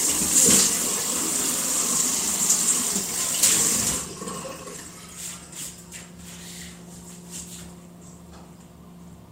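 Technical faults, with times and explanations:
No technical faults detected anywhere in the audio.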